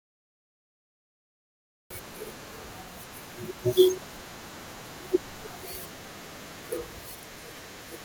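The audio sits in digital silence until 1.90 s, then enters mid-word with no natural attack: a cut-off start, where capture began late and truncated the speech.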